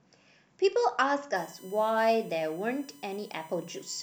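USB whine from 1.36 s to the end: a steady 1 kHz tone well under the speech, where 1 ms USB frame currents leak through power or ground.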